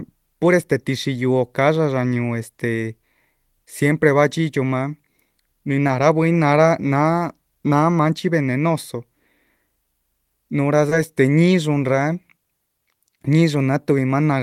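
At 5.87 to 5.89 s there is a lost packet rebuilt from error correction. The next packet carried a low-bitrate copy, so the decoder played 20 ms of rougher, noisier speech instead of a gap. Nothing goes missing, which sets it apart from concealment.

At 10.89 to 10.93 s a short concealed packet loss follows. The receiver filled 20 ms by extending the preceding sound and then blending back, giving a brief smear. Unlike the rebuilt frames, this audio is invented rather than degraded. Within the same span, 10.91 to 10.93 s is another 20 ms packet rebuilt from error correction, heard as the same rough, noisy texture.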